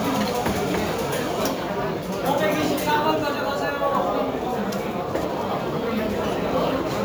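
Throughout the clip, a crude rate conversion was applied: the audio was raised by a 3:2 ratio, which fits a step from 32 kHz to 48 kHz, by simply repeating samples with no filtering. The resulting inharmonic fizz, roughly 25 dB below the sound, rides on louder and brighter moments.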